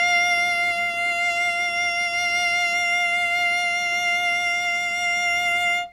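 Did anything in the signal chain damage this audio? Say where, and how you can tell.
No, no signal-chain damage heard.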